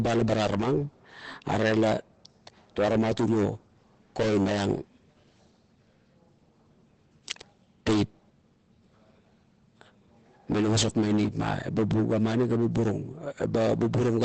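From start to finish the speech is muffled and hoarse, with nothing above about 8.7 kHz. The likely cause is Opus compression in its SILK speech mode, which fits a low bitrate near 16 kbps, narrowing the bandwidth and roughening the voiced sound.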